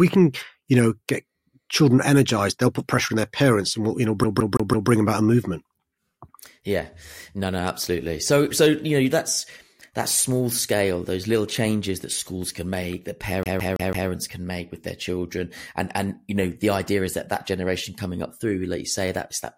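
At 4.24 s the speech catches in the fault of a CD stuck on one turn. A scratch keeps throwing the laser back one track. The same 0.17 s slice plays four times, with a brief mute at each jump, until 4.90 s. It recurs from 13.43 to 14.10 s.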